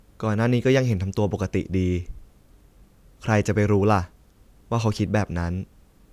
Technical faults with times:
none

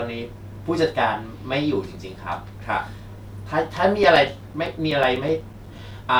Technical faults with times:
4.03-6.04 periodic USB or driver dropouts

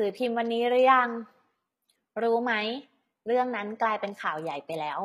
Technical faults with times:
0.00-5.04 HE-AAC compression

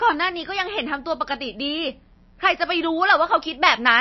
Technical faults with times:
0.00-4.00 mains buzz
0.00-4.00 MP3 compression

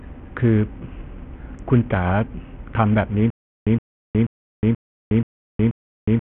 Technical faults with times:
0.00-6.29 Bluetooth SBC compression
3.30-6.29 stutter with silent gaps

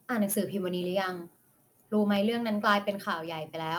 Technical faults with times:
0.00-3.79 sample clock jitter
2.16 dropped samples
3.06 microphone volume stepped down
3.27 dropped samples

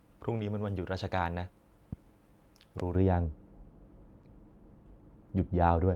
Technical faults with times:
0.37-0.41 short concealed packet loss
1.93-1.95 loud pop
2.80-2.82 loud pop
2.95-5.95 de-emphasis applied wrongly
4.21-4.25 short concealed packet loss

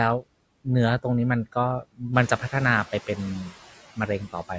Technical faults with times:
0.00-4.59 noise suppressor artifacts
1.82-2.02 speech cut by the noise suppressor
3.96-4.51 speech cut by the noise suppressor

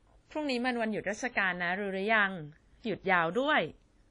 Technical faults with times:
0.00-4.10 transcoding between lossy codecs

